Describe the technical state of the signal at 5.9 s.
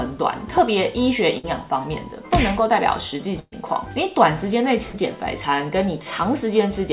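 At 5.9 s the signal is intact, with no dropout, glitch or distortion, just the narrow telephone-band sound of the call path, with nothing above 4 kHz, which fits G.711 mu-law at 64 kbps.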